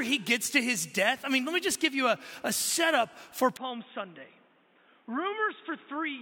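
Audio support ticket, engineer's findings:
From 3.57 s to end: sound turns dull and boxy, nothing above 3.8 kHz, level down about 5 dB, new noise floor roughly 30 dB under signal, no gap at switch. Likely input switched to a poorer device, narrower-band mic. Changed noise and tone rule out plain lowpass filtering.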